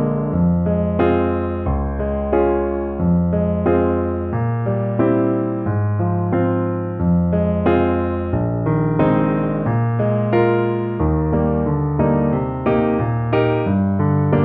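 Nothing is technically wrong with this audio; there are no faults to place in time or trace to a cause.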